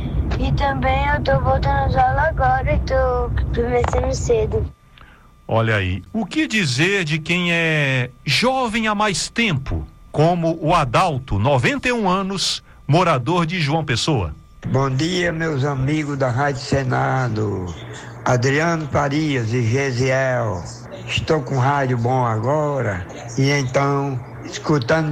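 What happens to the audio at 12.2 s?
Nothing goes wrong at 12.2 s; the audio plays through that moment intact, with no dropout, click or distortion.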